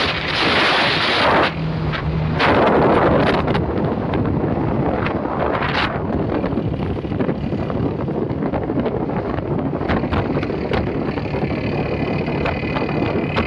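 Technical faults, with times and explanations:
Throughout: wrong sample rate. Everything plays at 0.667 times normal speed and about 7 semitones low, which fits 48 kHz audio played at 32 kHz. On a spectrogram all energy sits at two-thirds of its original frequency and stretches 1.5 times longer; waveform envelopes look drawn out.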